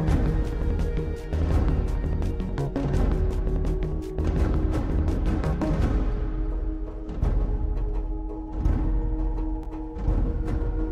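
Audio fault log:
No fault is found in this audio.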